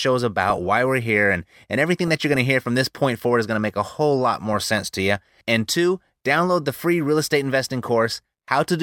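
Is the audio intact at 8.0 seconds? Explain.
No. DAB burbling appears at 8.01 s, right after "free real estate investing." Bit errors from weak reception, a fraction of a percent, slip past error correction into the MP2 data. Across 7 frames, corrupted samples put short blips of noise in single sub-bands, and corrupted scale factors make sub-bands jump in level for up to a frame, producing a brief burble.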